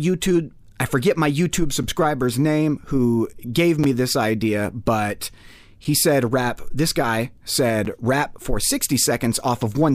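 Gap between chunks at 1.83, 3.84 and 7.85 s: the audio drops into a brief silence of about 7 ms at each of these points, heard as a short hole in the sound. The spacing matches audio that was delivered or stored in 2-second chunks, with a sliver of silence inserted at the joins, likely from codec padding or from playback starting each chunk late. Nothing is lost, but the flow is broken at each join.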